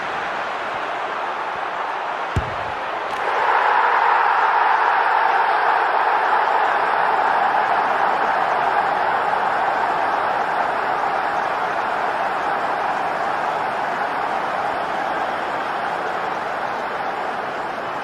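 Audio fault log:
No technical faults can be heard; the signal keeps consistent quality across the whole recording.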